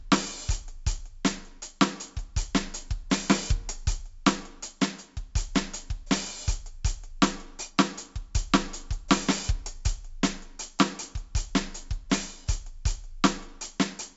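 Across the whole music clip, 4-bit ADPCM compression leaves a gritty hiss riding on every loud passage and smearing sharp attacks. The damage is heavy. On a spectrogram, level-tracking broadband noise sits under the music, and everything stops at 7.7 kHz, which fits 64 kbps at a 16 kHz rate.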